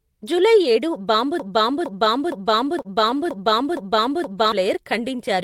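At 1.40 s the speech turns into a broken-record loop: the same 463 ms chunk plays seven times back to back until 4.52 s. The likely cause is a stall where the player kept resending its last buffered fragment, so the real audio for that stretch is gone.

Right after "జూలై ఏడు", from 2.65 to 3.29 s, there's also a stutter from repeated stalls. Five tiny gaps, the longest 29 ms, were bridged by stretching the last sound, about 61 ms in total. Nothing's lost, but it drags and catches.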